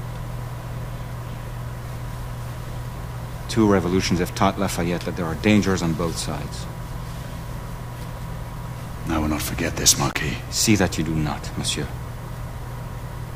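At 10.09 s an intermittent contact interrupts the signal: a loose cable or plug connection briefly opens, dropping the sound for about 35 ms within the disturbance that ends at 10.17 s. The break is framed by crackle as the contact separates and reconnects.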